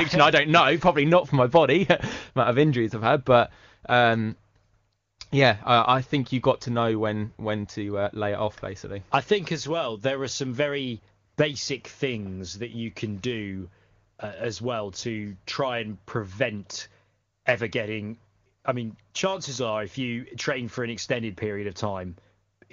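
No faults are audible in this speech; it comes through the AMR wideband (HD Voice) path as that codec normally sounds.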